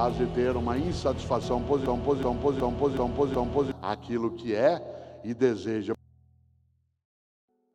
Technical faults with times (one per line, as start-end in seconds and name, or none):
1.86-3.72 system hang loop